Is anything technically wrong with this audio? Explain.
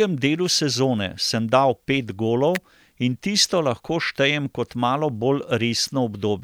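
Yes. At 2.55 s a sharp snap lands on top of the speech, lasting just under a hundredth of a second and peaking around -5 dBFS. It has the signature of an electrical switching spike: a brief arc from a nearby switch, motor or static discharge, likely coupled into the audio line as an impulse. Because it is added rather than replacing the signal, the speech continues underneath while the click stands out abruptly.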